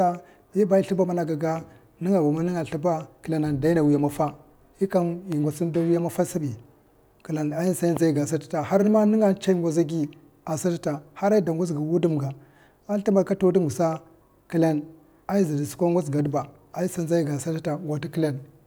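At 5.32 to 5.35 s, just before "inda a wiya maffa", and again at 7.97 to 7.99 s, a loud pop stands a little and then clearly above the speech. Each is a single sharp thump, likely a voltage pulse from a plug or switch. The speech continues unbroken beneath it, which separates it from a dropout.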